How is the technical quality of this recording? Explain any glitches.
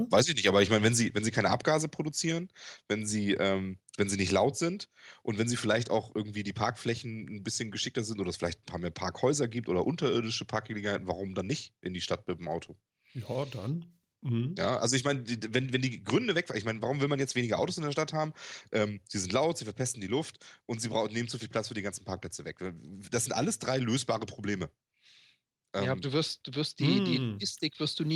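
Two glitches occur close together near the start of the speech.

From 0.46 to 0.97 s, just after "ich nicht", there is microphone overload. The loudest peaks sound harsh and crackly. The input level was likely set too high, driving peaks about 4 dB past the converter's limit. A small fraction of samples have their tops flattened.

At 1.02 s, just before "wenn sie keine", the microphone volume is stepped down. Voice and background drop together by about 2 dB in a single step. This is likely the call software reacting to the preceding overload by lowering the device's input volume.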